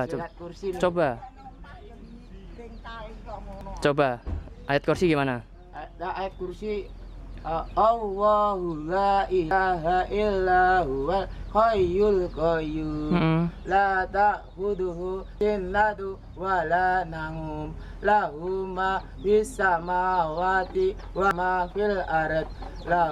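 The recording likely dropped a short piece each time it closed one roughly six-second chunk and opened the next, leaving audio missing between chunks. At 3.61, 9.51, 15.41 and 21.31 s, about a tenth of a second vanishes and the sound jumps abruptly forward without any silence.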